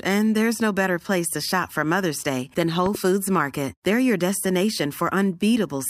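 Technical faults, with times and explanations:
2.86 to 2.97 s, loud pop: two sharp pops in quick succession jump roughly 10 dB above the speech, which carries on underneath. The likely cause is a sudden voltage pulse, such as from a plug, switch or static, added to the signal.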